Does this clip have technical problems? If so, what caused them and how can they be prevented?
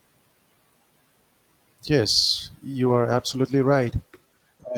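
Yes. A call bitrate drop starts at 2.85 s and lasts to the end of the clip. The speech turns coarser and duller, which fits the encoder being pushed from roughly 64 kbps down to about 15 kbps after the connection's bandwidth estimate fell. At that rate Opus quantises the signal heavily and trims the upper frequencies, and the bottom of the drop holds for about 1.4 s. Prevention: keep the connection's available bandwidth stable, and set a sensible minimum bitrate for the encoder.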